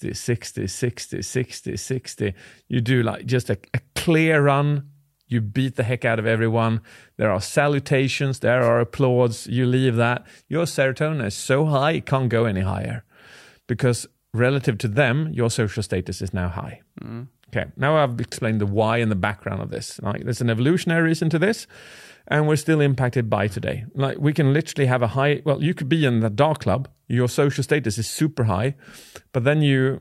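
No technical faults can be heard anywhere in the speech. There is nothing here to place on a timeline.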